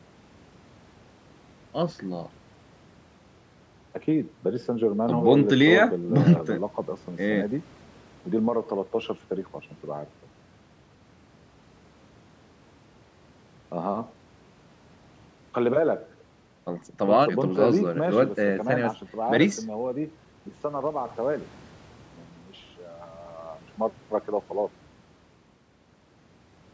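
No technical faults detected.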